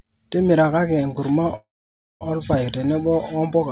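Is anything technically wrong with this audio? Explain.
Yes. From 1.56 to 2.23 s there is a call audio freeze, likely caused by delayed packets emptying the jitter buffer. The last sound is stretched into a decaying buzz, then about 0.55 s of near silence. A spectrogram shows a smeared horizontal band fading to blank, and the waveform goes flat. The speech then resumes intact, about 0.65 s late, with nothing lost. Throughout, nothing appears above 4 kHz, as expected for the G.711 call path.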